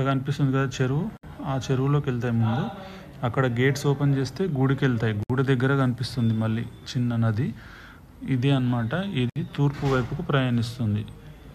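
Separately encoded pieces were joined without trimming the encoder's start-up delay and last-frame padding, leaving a gap at each join of encoded pieces. The sound drops out at 1.17 to 1.23 s, 5.23 to 5.30 s and 9.30 to 9.36 s, each gap about 62 to 64 ms long, recurring every 4.0 s. Each gap has smeared edges, and the sound resumes exactly where it stopped.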